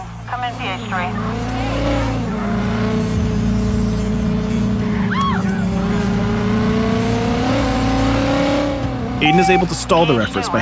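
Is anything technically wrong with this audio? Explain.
No, nothing is technically wrong with this audio.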